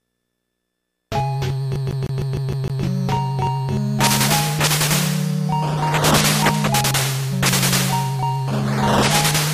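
The clip is stuck in a loop from 1.76 s to 2.83 s, the stutter of a CD stuck on one turn. A single 154 ms slice of sound plays seven times in a row at a fast, perfectly even rate, with a brief mute at each jump where the laser is thrown back one track by a scratch on the disc. The tiny silent gap at every restart and the strict regularity set it apart from a streaming buffer repeat or dropout stutter.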